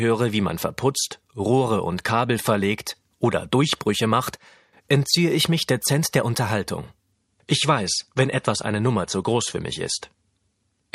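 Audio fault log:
7.12–10.94 s, adaptive stream at a lower bitrate: the sound suddenly loses everything above 11.3 kHz and gains swirly codec artefacts, which fits an MP3 stream stepping down from 128 to 48 kbit/s. Unlike a dropout there is no gap, and unlike plain filtering the artefacts rise.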